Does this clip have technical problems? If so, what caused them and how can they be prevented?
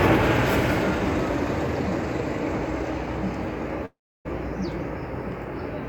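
Yes. From 3.85 to 4.27 s there is a long network dropout. The last sound is stretched into a fading buzz, followed by about 310 ms of near silence, and 400 ms of audio never returns. The likely cause is an interruption in packet delivery longer than concealment could cover. A larger jitter buffer with retransmission or forward error correction on a more stable connection helps prevent it.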